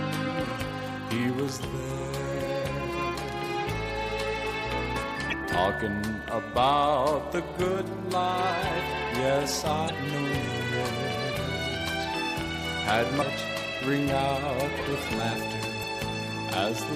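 Damaged data in a compressed stream: corrupted frames force the decoder to misread them and resynchronise, causing brief disruptions of roughly 40 ms in the audio at 0.56–0.60, 5.29–5.34, 9.86–9.91, 13.18–13.22 and 15.79–15.84 s.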